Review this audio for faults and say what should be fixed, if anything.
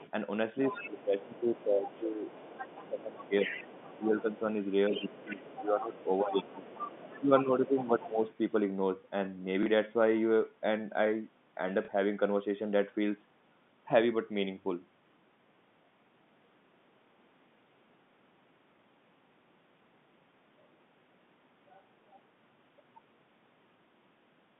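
Other side's voice leaking through: a faint trace from 0 to 0.11 s, then clearer stretches at 0.65–4.0 s and 4.9–8.8 s, sitting roughly 15 dB under the talker. It's likely loudspeaker echo the canceller didn't fully remove.

Speech suppressed in double talk: from 0.84 to 2.28 s and 2.8 to 8.3 s the talker dips by up to about 15 dB while the far side talks, likely because the canceller turns both down.

Packet loss with last packet repeated: small blips at 9.63 s and 11.85 s, where a 30 ms gap was filled by replaying the previous packet.

To fix these, tune the echo canceller's residual suppression and double-talk detection, and give the receiver smarter loss concealment than plain packet repetition.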